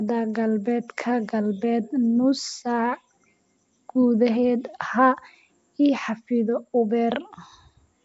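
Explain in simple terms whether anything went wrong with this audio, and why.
Throughout the whole recording the speech carries a rough, hissy halo and sounds smeared, a little as if heard underwater, and nothing reaches above about 7.7 kHz, so it also lacks crispness. This is most likely Nellymoser compression, the old Flash microphone codec. It squeezes sound into small blocks with very few bits, gives quiet parts of the sound no bits at all, and fills those gaps with noise, which causes the hiss and blur.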